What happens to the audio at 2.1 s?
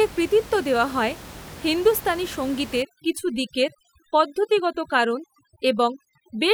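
Nothing goes wrong at 2.1 s: the audio runs through that moment intact, with only the room noise of the recording space sitting about 18 dB below the speech.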